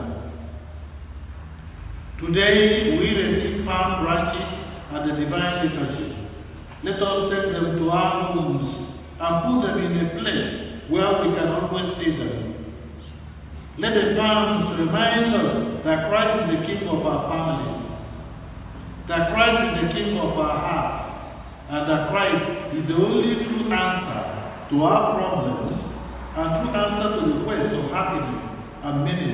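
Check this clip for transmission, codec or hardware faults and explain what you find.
No transmission, codec or hardware faults can be heard.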